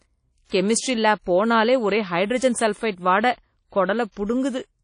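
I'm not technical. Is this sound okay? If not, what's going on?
No. From start to end the speech sounds washy and ringing, with a hiss that swells and fades along with the voice, and the top end is missing entirely, with nothing above about 10 kHz, so it sounds dull. The likely cause is WMA compression at a low quality setting: the encoder blurs small errors across short stretches of sound and throws away quiet details and the highest frequencies to save space.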